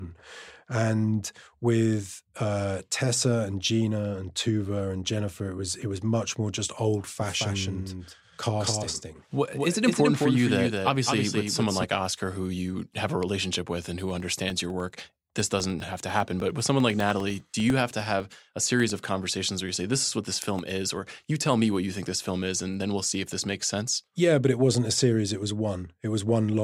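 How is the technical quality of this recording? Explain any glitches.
The recording has two faults.

From 7.2 to 11.84 s, after "much more just old", a doubled audio track appears. A full-band copy trails by roughly a fifth of a second, about 5 dB quieter, likely from a second capture path. Unlike room echo, it has no decay and switches abruptly.

From 14.0 to 19.0 s, between "a relationship with and" and "conversations where you say", periodic USB or driver dropouts cut roughly a millisecond of sound every 0.1 s, filling it with silence. The result is evenly spaced ticks, about fifty in all, unlike random clicks.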